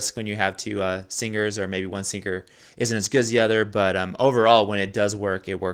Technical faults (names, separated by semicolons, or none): none